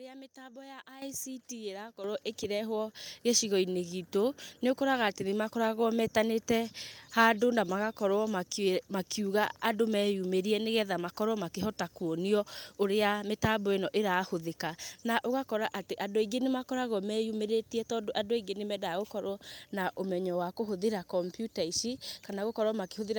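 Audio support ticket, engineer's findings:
Speech and background jump louder together in abrupt steps at 1.02 s, 2.04 s and 3.06 s (about 10, 8, 3 dB). Microphone volume stepped up: call software raising device input gain.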